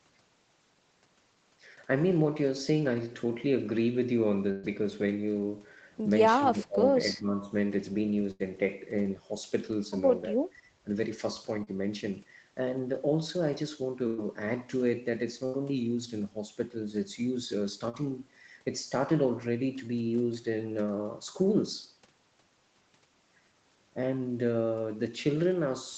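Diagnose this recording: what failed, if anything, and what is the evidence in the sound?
Network stage, burst of packet loss: at 4.51 to 4.66, 8.31 to 8.43, 14.07 to 14.21 and 15.46 to 15.56 s, roughly 80 to 120 ms of speech vanishes. Concealment stretches the last sound into a fading buzz or hiss, then resumes further on, longer than a brief smear.

Call processing, speech suppressed in double talk: from 6.38 to 6.95 s the speech drops by about 25 dB, and from 7.13 to 7.47 s by about 15 dB. The likely cause is an echo canceller ducking during overlapping talk. Level falls rather than being replaced by repeated sound.

Network stage, short concealed packet loss: at 11.64 to 11.70 and 17.89 to 17.96 s, about 40 ms went missing and was patched by continuing the preceding sound, heard as a quick smear or wobble. It is far shorter than the bursts, with no held buzz or long skipped stretch.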